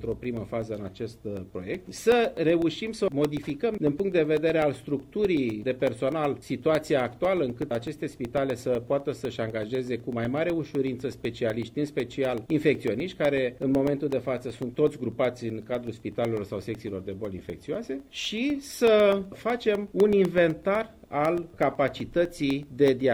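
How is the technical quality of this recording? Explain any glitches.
The recording is compromised by a steady ticking running through almost its entire length.

Periodic USB or driver dropouts, 0.12 to 23.0 s: a blocked bus silences roughly 1 ms every 0.125 s, so ticks fall evenly under sound, unlike irregular crackle.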